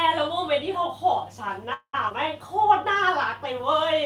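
At 1.73 s the speech halts in a call audio freeze lasting until 1.95 s. The receiver fills about 200 ms by stretching the last sound into a fading buzz or hiss, with roughly the final 70 ms dropping to silence. Nothing is lost: playback resumes exactly where it stopped, just late. The likely cause is packets held up in transit, draining the jitter buffer, so the stream's delay rises by about 200 ms.

Shortly after, at 2.09 s and running to 2.13 s, comes a skip ahead. About 70 ms of speech is absent, and the two sides are joined with only about 13 ms of fill, so the audio lurches forward rather than pausing. This is consistent with the buffer discarding queued audio, cutting the delay by roughly 50 ms.

From 2.47 s to 3.40 s a jitter buffer slow-down is audible. To rebuild its reserve, the receiver repeats single pitch periods and small slices of pauses many times over, adding 49 ms across that stretch. 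Speech runs at about 95% speed with pitch unchanged, so vowels and gaps sound slightly drawn out.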